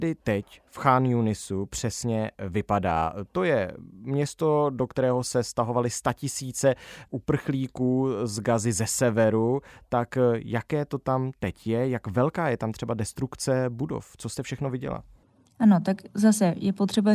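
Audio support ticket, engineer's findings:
Listened through; no faults found in the speech.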